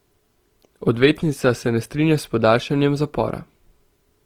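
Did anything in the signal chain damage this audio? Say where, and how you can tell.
Yes. Opus compression throughout, at the codec stage: the speech keeps full bandwidth to 20.2 kHz yet sounds grainy and rough, likely from noise-filled bands at about 24 kbps.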